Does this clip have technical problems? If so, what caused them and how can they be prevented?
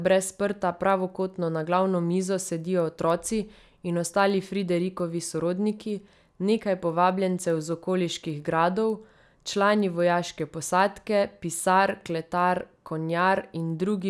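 Yes. Throughout, a resampler restarted on every block, converting 48 kHz to 24 kHz in 100 ms pieces, leaves edge errors ticking at a steady 10 Hz. Unlike random dropout clicks, these are regular and vanish in silence. Keeping one continuous resampler state across blocks prevents this.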